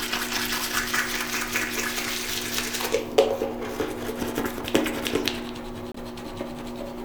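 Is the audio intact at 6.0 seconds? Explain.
Yes. A corrupt frame muted from 5.92 to 5.97 s, just before 6.0, cuts an abrupt 56 ms silence, fitting one damaged frame the decoder rejected and replaced with silence.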